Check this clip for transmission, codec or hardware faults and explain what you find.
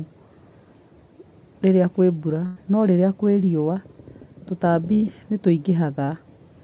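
Three transmission faults are present, all from packet loss on a narrowband call path. The band stops at 4 kHz, which fits a G.711-style telephone codec.

A burst of packet loss occurs from 2.46 to 2.58 s, just before "no rĩrĩa", and again from 4.94 to 5.04 s. Consecutive packets went missing, about 100 ms and 80 ms of sound. The receiver stretched the last sound and faded it, so a held buzz or a fading hiss dies away before speech resumes further on. On a spectrogram this shows as a frozen, repeating pattern that dims. The waveform has a decaying envelope and then an abrupt restart.

A short concealed packet loss occurs at 6.04 to 6.10 s. About 40 ms never arrived, and the gap was bridged by extrapolating the preceding sound and crossfading back. It is heard as a brief smear or wobble. A spectrogram shows a short blurred patch.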